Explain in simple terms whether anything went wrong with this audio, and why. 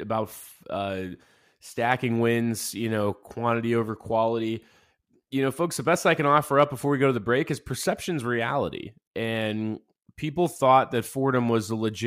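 Nothing went wrong with this audio, and no technical faults can be heard anywhere in it. From the first moment to the last, nothing in the speech calls for attention or repair.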